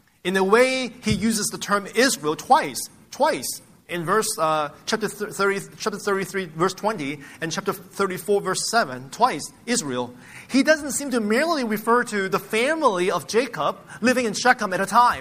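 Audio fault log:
No fault can be heard anywhere in the audio.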